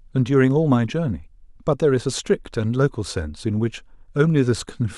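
Listening closely to this speech recording, nothing technically wrong stood out.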